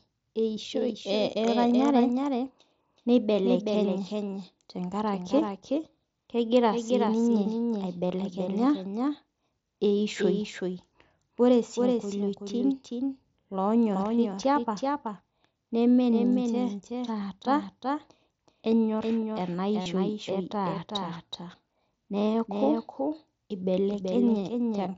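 Throughout the speech, a doubled audio track is audible: a dry, full-band copy trails roughly 0.4 s behind at about 5 dB lower, likely from a second capture through a slower path.

Concealed Bluetooth headset packet loss occurs at 8.08–8.10 s, 17.21 s and 19.82–19.86 s. The receiver bridges each gap with a repeated stretch of recent waveform. The gaps are about 23, 8 and 38 ms long, which fits three, one and five lost 7.5 ms frames. The longest gap is heard as a brief buzzy hold ending in a slight warble.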